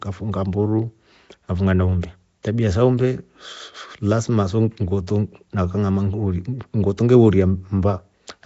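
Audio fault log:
throughout: Nellymoser compression, likely from the Flash-era Nellymoser Asao codec at a rate fitting 32 kbps. Bands too weak to earn bits are refilled with noise, giving a rough, hissy halo and smeared, underwater speech. A spectrogram shows grainy, noise-filled patches and nothing above 7.7 kHz.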